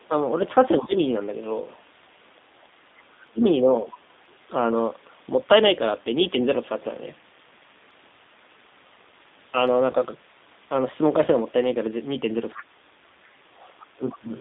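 From start to end, the speech carries the sound of the G.729 codec. The band runs only from about 200 Hz to 3.7 kHz, so the top and bottom of the voice are gone. The damage is plainly audible. The coder rebuilds speech from a vocal tract filter, a pitch predictor and a few pulses per frame. That leaves the voice rough and slightly synthetic. The character fits an 8 kbit/s G.729A stream.

At 9.92 to 9.96 s there is VoIP packet loss concealed by the speech codec. About 20 ms of audio went missing, which fits a single lost packet. The decoder had nothing new, so it repeated its last pitch and filter with falling gain. The gap is filled by a brief stretched sound, a buzzy tone or coloured noise that fades. Because each frame builds on the one before, the voice stays weak or distorted for a short while after 9.96 s.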